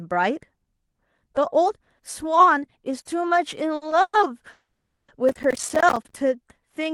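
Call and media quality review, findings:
Short stalls from a late packet at 3.75–3.83 s and 3.89–3.93 s: speech held and smeared for 60 ms, then 20 ms, with a faint buzz. Jitter buffer ran dry and the receiver stretched the last sound. Nothing lost, just delayed.

Call audio freezes at 4.01–4.15 s and 4.51–5.10 s, likely packets stuck in transit emptying the jitter buffer. The last sound continues as a fading buzz, then silence for 50 ms and 390 ms. Speech resumes where it stopped, 120 ms and 570 ms late.

Processor overload crackle, 5.29–6.16 s: gritty tearing over the speech. CPU missing deadlines on roughly 10 ms buffers, about forty times, each miss dropping a hard-edged silent gap. Clears once the load eases.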